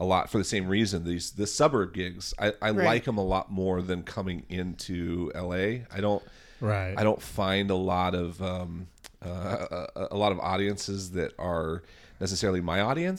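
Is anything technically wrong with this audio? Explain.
No, nothing is technically wrong with this audio.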